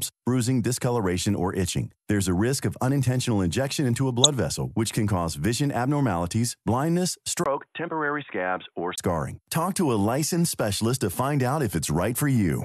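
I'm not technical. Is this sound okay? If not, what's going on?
No. At about 4.24 to 4.27 seconds, between "unintentional injection into a" and "vessel which can cause", there is a tiny glitch caused by damaged data in a compressed stream. Part of the file was corrupted, so the player lost its place.

From about 7.44 to 8.98 seconds, right after "cause vision abnormalities blindness", the sound turns dull and boxy, loses everything above 3.8 kHz and gets a little quieter. That is likely an input switched to a poorer device. Unlike simple muffling, it begins with a 20 ms silence at the switch.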